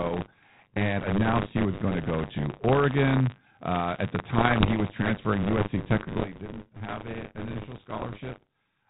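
A steady robotic buzz at 100 Hz rides on the speech from start to finish, present only while there is signal. This is buffer tearing: the writer and reader of the playback ring buffer have slipped, so they cross inside every period. In each 10 ms period a small slice holds audio from about 40 ms earlier, butted against the current audio with hard joins on both sides, and that repeating splice is the rattle.

Between 4.38 and 4.74 s, just after "at the" and before "was transferring", the sound breaks into pops and rough, gritty bursts with brief swings in level. These are bit errors on an ADPCM link, at a rate of around one percent. Each flipped bit throws off the decoder's step size and predictor, so the damage rings on for a few milliseconds rather than staying a single click. The G.726 ADPCM path carrying the call passes audio normally here, band-limited below 4 kHz.

At 6.20 s the speech and its background noise drop together by about 12 dB in one step and stay down to the end. 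This sudden gain jump is likely a digital gain setting applied from one sample to the next with no ramp.

From 7.93 to 8.06 s a shorter, lighter cluster of the same pops and rasping bursts returns. These are more bit errors on the ADPCM link, at roughly half a percent.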